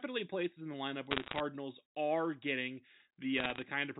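Sharp ticks and crackle break over the speech from 1.11 to 1.4 s and from 3.38 to 3.62 s. These are bit errors on a digital phone line, with flipped bits corrupting single G.711 samples, the first burst slightly denser.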